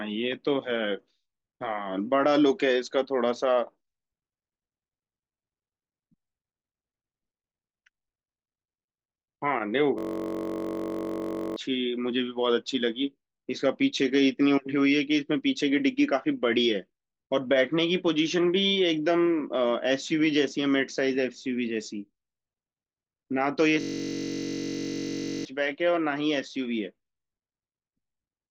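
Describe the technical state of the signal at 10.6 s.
At 10.6 s the speech is frozen in a system hang loop, running from 9.98 to 11.56 s: the hardware keeps replaying one 21.33 ms slice, fitting a 1024-sample buffer, as a steady 46.9 Hz buzz. Unlike a plain dropout, it keeps sounding, and about 1.5 s of speech is lost.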